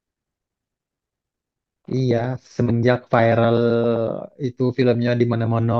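Nothing stood out on listening to this speech recording.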